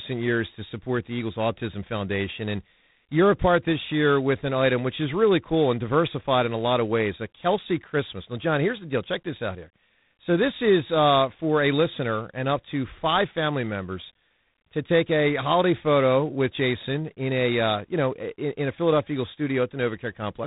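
From start to finish, the speech carries a harsh, rasping hiss that rises and falls with its level, and nothing passes above 3.8 kHz. This is G.726 ADPCM coding, with too few bits for each predicted sample difference, which fits 24 kbit/s.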